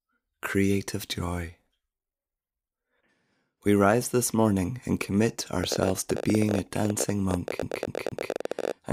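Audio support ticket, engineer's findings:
Train of clicks from 5.64 s, just after "this morning and commit", running to the end of the clip. Irregular ticking at about 18 per second, peaks well above the speech, audible in pauses too. Likely cause: interference from nearby equipment or a faulty connection or power supply injecting similar pulses.

CD stuck on one turn, 7.62 to 8.32 s. A 235 ms segment repeats three times, with a brief mute at each jump. This is fast, even stutter from the disc laser skipping back one track at a scratch.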